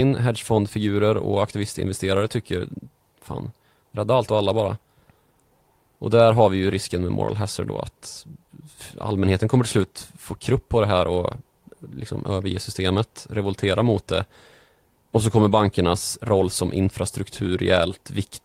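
Nothing stood out as a technical fault on listening to the speech here.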